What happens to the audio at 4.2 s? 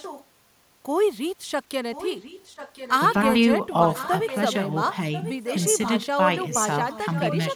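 At 4.2 s there is an echo leak, running from 3.96 to 4.53 s: a delayed copy of the speech, about 1.04 s late and roughly 10 dB quieter, is heard under the talker. The likely cause is a loudspeaker on the far side whose echo canceller let part of the sound through. On a spectrogram, the same harmonic patterns reappear weaker, shifted about a second; the waveform shows a low-level ghost trace.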